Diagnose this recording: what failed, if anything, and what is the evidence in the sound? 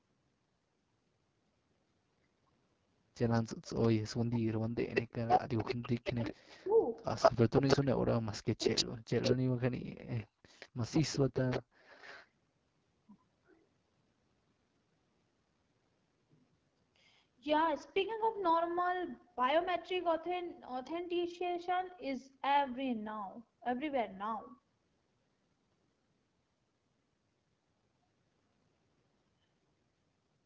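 Codec stage: the whole clip carries the rough, raspy texture of the AMR wideband (HD Voice) codec at 8.85 kbit/s, one of its lowest rates. The speech model has too few bits for detail, so voiced sounds turn gritty, and the top band above 6.4 kHz is filled with shaped noise.

Call processing, echo leak: delayed copies of the speech return at 3.35 to 3.88 s (208 ms late, about 20 dB down), 4.94 to 7.77 s (174 ms, about 5 dB louder than the speech) and 8.63 to 12.27 s (174 ms, about 5 dB down). The likely cause is a loudspeaker-side echo canceller letting residual pickup back into the call.

Call processing, speech suppressed in double talk: between 3.93 and 10.45 s the talker repeatedly dips and breaks up, with drops reaching roughly 40 dB and about 4 s affected in total. The likely cause is the canceller failing to separate near speech from echo and attenuating both.

Call processing, background gated by the echo canceller: at 11.62 to 11.78 s the room sound drops by about 30 dB for 150 ms, then returns. 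The canceller clamped the microphone hard while the loudspeaker played. Bass roll-off from the call microphone filter is normal there.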